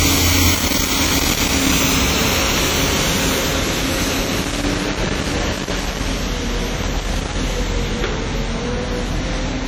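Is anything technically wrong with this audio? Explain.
Yes. Throughout, the audio sounds washy and ringing, with hiss that swells and fades with the signal. This is likely heavy WMA compression at a low bitrate, around 32 kbps. Long transform blocks smear quantisation noise, and weak spectral lines are zeroed, so a spectrogram shows blurred transients and patchy, holey detail.

Loose connector crackle occurs from 0.54 to 1.72 s, 4.26 to 6.06 s and 6.83 to 7.35 s. An intermittent contact repeatedly breaks the signal, producing irregular scratching. The waveform shows jagged dropouts and spikes, and the spectrogram shows broadband vertical streaks.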